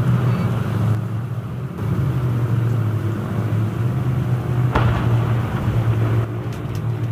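The audio drops abruptly by about 6 dB from 0.95 to 1.78 s and again from 6.25 s to the end, most likely because one channel drops out. On a waveform the envelope halves in sharp steps; a spectrogram shows matching uniform dimming across all frequencies.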